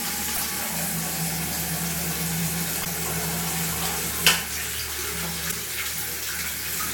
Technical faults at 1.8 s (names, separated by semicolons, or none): none